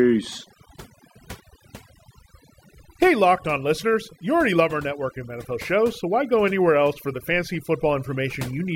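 Overdone noise removal runs through the whole speech clip. A noise reducer set far too aggressively pulls individual frequency bands down whenever they sit near its noise estimate, stripping quieter parts of the voice too, so pauses collapse into near silence with twinkling specks.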